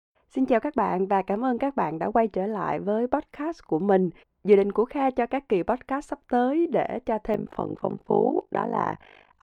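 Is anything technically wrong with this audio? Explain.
Yes. Overlap-add ripple from 7.34 s to the end, after "sắp tới để cho": frames overlap without constant-gain summing, so level dips about 60 dB around fifty times a second, a rough robotic flutter.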